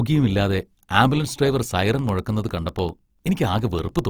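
Speech clip whose tones sound grainy, rough and noisy across the full band, with content up to about 20.4 kHz, likely Opus compression in CELT music mode at a low bitrate near 24 kbps. From 1.79 s to 3.99 s, just after "ഇല്ലാതെ ആംബുലൻസ് ഡ്രൈവർ", periodic USB or driver dropouts blank about half a millisecond to silence every 0.1 s, producing roughly twenty evenly spaced ticks.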